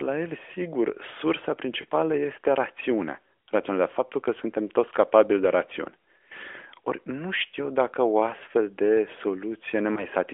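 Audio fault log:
1.82–1.85 s and 9.94–10.06 s, lost AMR speech frames: a single 20 ms frame missing each time, concealed by repeating the previous frame's parameters at lower gain, heard as a brief dip or warble in the narrowband speech.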